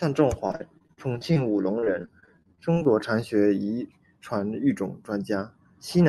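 Repeated packet loss (robotic sound) runs from 0.47 to 1.37 s, ending just before "武隆", and again from 1.79 to 3.24 s, just after it. Audio packets kept going missing, and each hole was filled by stretching the last sound forward, with gaps up to 40 ms in the first stretch and 26 ms in the second. Roughly a quarter, then a sixth, of each span is patched. The speech comes through the call path with an upper limit near 12 kHz, and it turns choppy, with pieces clipped away.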